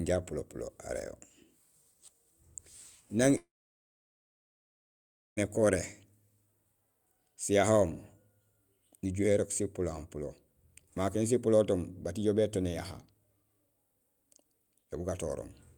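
At 3.37 s the speech stops abruptly. For roughly a tenth of a second the last sound carries on as a decaying buzz, then about 1.9 s of silence follows until the audio resumes at 5.39 s, with around 2 s of speech simply gone. This is a long network dropout: the stream likely stopped arriving, the receiver briefly stretched the final sound to cover the gap, gave up, and picked up again later without the lost stretch.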